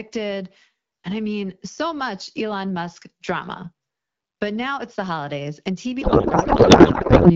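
From 6.01 s to the end at 7.36 s, a codec payload misread takes over. Octet-aligned AMR-WB frames, clear at 12.65 kbit/s before this, are unpacked as bandwidth-efficient, so every field is misplaced and the speech becomes warbling noise that barely tracks it. Unlike packet loss, there are no gaps, just continuous garble.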